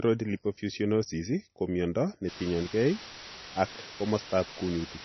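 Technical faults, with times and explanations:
Throughout: MP3 compression, likely at a very low rate of around 24 kbps. Nothing is heard above 6 kHz, and the speech sounds heavily watery and swirly as weak frequency lines drop in and out between frames. The fixed treble cut and this warbling set it apart from plain low-pass filtering.
2.28 to 5.04 s: low bit depth with dither, starting right after "lipofuscinosis ko miondo". The sound is reduced to about 5 bits, and dither turns the rounding error into a steady, even hiss about 10 dB below the speech. There is no gritty distortion, which tells it apart from undithered truncation.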